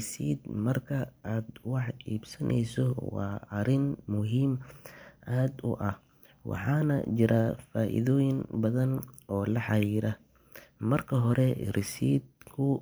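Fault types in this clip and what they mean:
Nothing stood out on listening to this speech recording.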